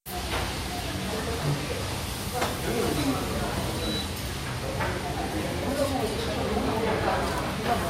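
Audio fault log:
4.01 s, compressed frames skipped: a few 20 ms frames never reach the output, so the sound lurches forward by roughly 70 ms. Unlike a dropout there is no silent gap.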